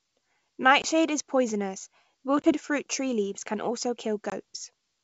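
Speech carried over a wideband G.722 link shows packet loss on an ADPCM call at 0.82–0.85 s, 2.42–2.53 s and 4.30–4.40 s, each a hard-edged silent hole of about one 20 ms packet. Unlike a simple dropout, the speech comes back with brief, slight distortion, because the decoder's predictor and step size have drifted from the sender's and need tens of milliseconds to resettle.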